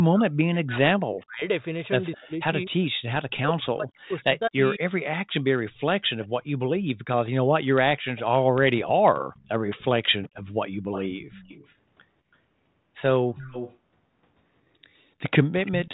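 From 0.07 to 4.83 s the talker keeps dipping, by as much as about 40 dB at worst and for about three seconds in all. That's speech suppressed in double talk, likely the canceller ducking everything while both ends spoke.

Overlapping that, from 2.15 to 3.57 s, a faint delayed copy of the voice trails about 212 ms behind at about 25 dB down. It's echo leak, likely loudspeaker pickup the far end's canceller didn't fully remove. The same 212 ms echo comes back briefly at 6.22 to 6.27 s and again from 8.16 to 11.75 s. At 13.36 to 13.77 s the delay shifts to 329 ms and the echo gets much louder, only about 10 dB under the speech.

At 14.69 to 15.0 s the room tone drops by about 12 dB for roughly 300 ms. That's background gated by the echo canceller: it clamps the mic while the loudspeaker plays, then lets go.

Right at the end, 15.66 to 15.93 s, the 329 ms echo returns at about 20 dB down.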